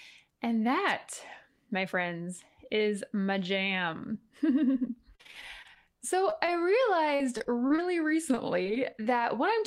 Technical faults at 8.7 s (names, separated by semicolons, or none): repeated packet loss (robotic sound)